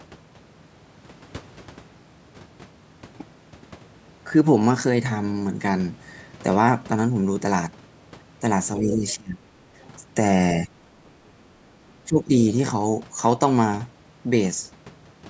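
Speech that dips during double talk, the talker suppressed as both sides speak at once, from 8.8 to 9.42 s (down by roughly 20 dB), 9.74 to 9.78 s, 10.65 to 10.9 s and 12.05 to 12.33 s, each briefer and shallower. An echo canceller likely mistook the overlap for echo; unlike a network dropout, the level ducks and recovers rather than going silent. The other side's voice leaks through faintly at 9.08 to 9.13 s and 9.82 to 9.89 s, roughly 25 to 35 dB under the talker. This is likely residual loudspeaker echo, a second voice rather than a repeat of the talker's own sound.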